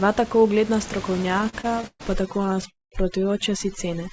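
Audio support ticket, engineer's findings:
Repeated stalls (stutter), 1.10–2.02 s and 2.38–2.64 s: jitter buffer underruns, 15 then 7 gaps. Longest is 129 ms. Waveform shows repeated, fading copies of preceding cycles. Nothing lost; playback drags.

Overdone noise removal, 2.14 s to end: suppression set too hard against room noise about 16 dB below speech. Spectrogram shows a near-empty background with twinkling specks.

Call audio freeze, 2.70–2.94 s: sound holds, then decays into about 180 ms of flat silence. Audio resumes 214 ms late. Likely jitter buffer starved by delayed packets.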